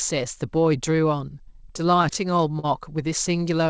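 Packets reached the jitter buffer late or more slowly than they were played out between 1.92 and 2.65 s of this speech clip, so the buffer ran dry seven times, producing repeated stalls (stutter). Each time, the receiver stretched the last sound to cover the wait, about 97 ms in total, with the longest hold 40 ms. Nothing drops out, but roughly a seventh of that stretch is filled-in sound, so the speech drags and stutters. The band stops at 8 kHz, which fits G.722 at 64 kbps.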